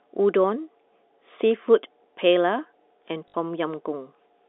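At 3.28 s the speech breaks into a short robotic stutter lasting until 3.34 s, about 60 ms. This is packet loss with the last packet repeated: the receiver replayed the most recent packet while new ones were missing, which fits three 20 ms packets. Each repeat ignores the pitch cycle, so the run buzzes at the packet rate. A dropout to silence would leave a gap, but here the sound keeps going. The G.711 telephone coding stays limited to the narrow phone band.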